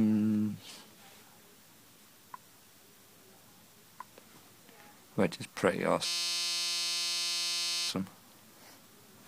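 From 0.35 s to the end, a click recurs every 1.14 s, most likely clock drift buffer slips. Two independently clocked devices disagree by something on the order of 150 ppm, so the buffer between them creeps out of step until a handful of samples is dropped or repeated. On a waveform each slip is a tiny discontinuity. On a spectrogram it shows as a thin vertical broadband line, evenly spaced across the clip.

Between 6.06 s and 7.89 s the sound turns into a steady, rigid buzz at 172 Hz. This is a system hang loop: the host stalled while the audio hardware kept replaying the same 5.8 ms stretch, which fits a 256-sample buffer, several hundred times in a row. The waveform shows identical repeating cycles, and the spectrogram shows a flat comb of harmonics at multiples of 172 Hz.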